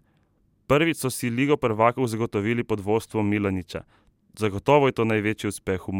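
A speech clip with one corrupt frame decoded, from 0.95 to 0.98 s. Bits inside a single compressed frame were flipped, and the decoder played it anyway, so misread gains or codes placed energy at the wrong frequencies for roughly one frame's length. The result is a brief chirp, squeak, blip or burst of stray noise, short and very quiet, peaking at only around -50 dBFS, so it sits faintly against the speech.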